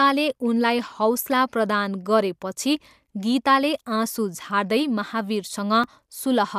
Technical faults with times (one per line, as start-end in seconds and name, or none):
5.84 block of digital silence